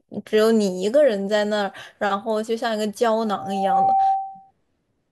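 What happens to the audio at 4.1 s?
Loudspeaker feedback squeal runs from 3.25 to 4.51 s, so 4.1 s falls inside it. The microphone is picking up its own loudspeaker, and the loop gain exceeds one at 775 Hz. That pure tone swells over about half a second and sits roughly 5 dB above the speech.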